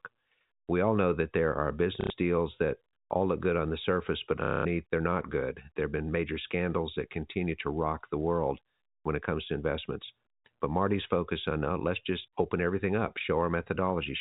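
At 2.01 s, after "know that there are", and again at 4.44 s, after "on the surface but", packet loss with last packet repeated leaves a 90 ms and then a 210 ms robotic stutter, the repeat pattern fitting 30 ms packets. It buzzes rather than falling silent like a dropout.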